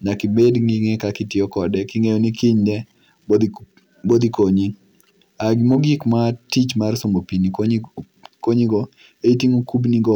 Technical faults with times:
0.37-0.48 hard clipping
3.33-3.36 hard clipping
4.12-4.43 hard clipping
5.48-5.75 hard clipping
9.28 hard clipping

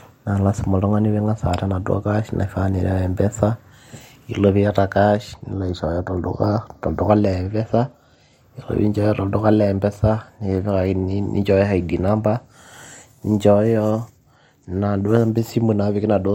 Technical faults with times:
5.52-7.09 channel delay (comb filtering)

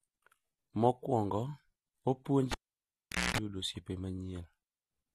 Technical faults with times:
0.00-5.14 AAC compression
2.52-3.38 cable pulled and plugged in

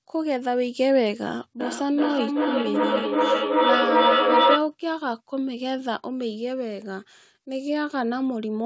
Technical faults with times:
1.60-4.76 feedback echo between two devices

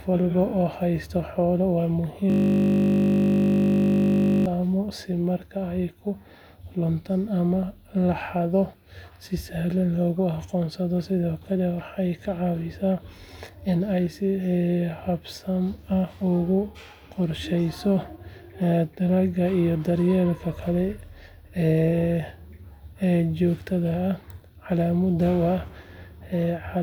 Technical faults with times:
2.30-4.46 system hang loop

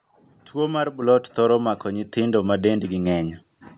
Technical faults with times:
1.02 microphone volume stepped up
2.04 microphone volume stepped up
3.06 microphone volume stepped up

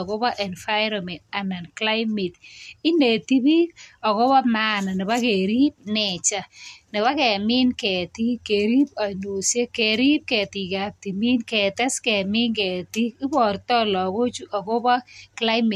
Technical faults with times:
none

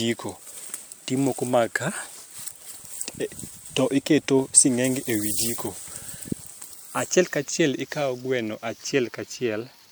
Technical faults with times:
0.00-9.92 generation loss

